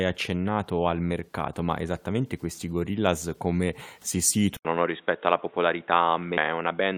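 At 4.57 s, right after "come si", the speech abruptly loses its upper range and turns boxy and dull, as though the input switched to a poorer device, likely a different microphone or a headset call profile. An 80 ms gap of silence marks the change. Nothing survives above 3.8 kHz, and a new noise floor appears far below the speech, at about 35 dB down, while loudness stays much the same. On a spectrogram the energy above 3.8 kHz cuts off sharply from that point to the end, leaving a flat ceiling after a narrow blank column at the switch.

At 6.37 s a brief glitch interrupts the sound, the mark of damaged data in a compressed stream. The decoder ran into corrupted bytes, misread the frame, and searched for the next valid header to resynchronise, so the audio glitches. A spectrogram would show a thin vertical disturbance at that instant, and the waveform would show a tiny discontinuity where the signal breaks.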